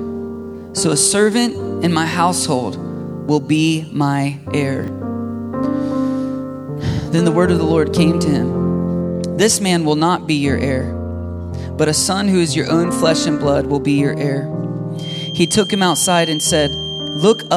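Around 4.84 to 4.88 s there's a quick jumbled blip. That's chunks out of order: a 20 ms piece of audio turned up one slot late and got played after the piece that should have followed it. Nothing's actually missing, but the sequence is scrambled, with three hard joins where the pieces were spliced together.

From 14.93 s right through to the end, a thin, steady tone at 3.2 kHz sits roughly 10 dB under the main sound, swelling and fading slowly in level. It sounds like a feedback whistle, most likely the loudspeaker-to-microphone loop hovering just at the edge of feedback. That would keep one high frequency ringing without ever building into a full howl.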